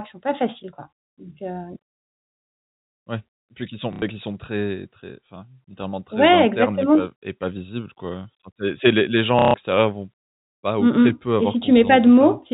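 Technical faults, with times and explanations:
3.93–4.02 s and 9.39–9.54 s, packet loss with last packet repeated: 90 ms after "puis qui sont" and 150 ms after "c'est les les gens" went missing. The last packet replays, so each gap sounds like a robotic stutter.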